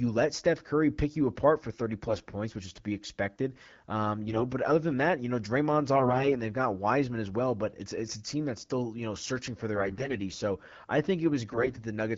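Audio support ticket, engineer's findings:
AMR bit errors, 2.05–2.34 s (before "which is to be"), 4.28–4.45 s (before "but other than that"), 5.96–6.37 s (before "they've got"), 9.75–10.20 s, 11.52–11.82 s. Hoarse, scratchy, gargly bursts; pitch and level held. Weak-link bit flips in lightly protected AMR-WB bits: excitation pulses misplaced, fine pitch, gain and spectral values off. Burst lengths fit whole 20 ms frames. Surrounding HD Voice sounds like roughly 12.65 kbit/s.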